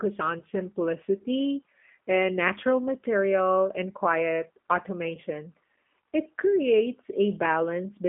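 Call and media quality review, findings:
Rough, slightly synthetic speech throughout, no content above 3.4 kHz or below 200 Hz; G.729 codec at 8 kbit/s, likely G.729A, rebuilding speech from filter, pitch and pulse parameters.

Brief smear at 0.39–0.42 s, just before "simplicity and natural material", and again at 5.15–5.19 s. This is VoIP packet loss concealed by the speech codec, with about 20 ms of lost audio each time, consistent with a single packet. The decoder extrapolates from the last frame, and the audio stays weak or distorted as it recovers.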